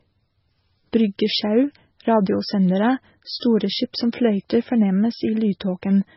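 Heard throughout this speech clip is MP3 compression, likely from a very low bitrate around 16 kbps: nothing remains above 5.6 kHz, and weak detail flickers in a watery, swirly way, which separates it from plain low-pass filtering, where the dull treble would sound steady.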